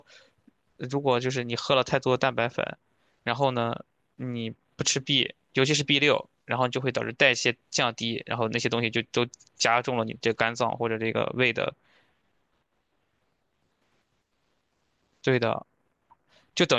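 No dropouts, clipping, distortion or timing defects are audible anywhere in the speech recording.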